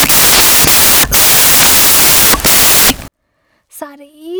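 From 0.0 to 3.08 s, the speech turns into loud, harsh broadband noise. These are samples built from the wrong bytes. Each sample's bytes are misassembled, so the fast-changing low bits dominate.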